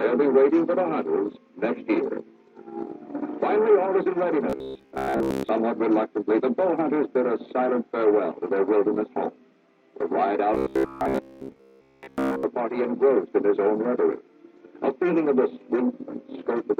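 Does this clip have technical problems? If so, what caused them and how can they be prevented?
Yes. From 4.50 to 5.49 s and again from 10.55 to 12.43 s the sound turns into a rigid, metallic buzz near 66.7 Hz. This is robotic sound from repeated short buffers, likely caused by audio arriving too seldom so that a 15 ms chunk is looped in place of most of the real signal. Larger or adaptive jitter buffers and steadier delivery would prevent it.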